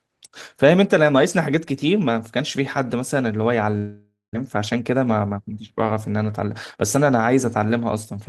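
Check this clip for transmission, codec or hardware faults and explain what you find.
There are two transmission faults in this speech clip.

From 3.77 to 4.37 s there is a dropout. It sounds like a long network dropout, likely caused by packet loss. The last sound carries on as a fading buzz for about 0.57 s, with a short silence in it. About 0.4 s of speech never returns. Playback resumes later, with roughly 150 ms more delay.

Jitter buffer speed-up follows twice, from 4.56 to 5.59 s and from 6.39 to 7.04 s. The buffer had built up extra audio. It cut many small pitch-period slices, about 100 ms in the first stretch and 50 ms in the second. The speech runs 10% and then 6% faster at unchanged pitch, and it sounds hurried.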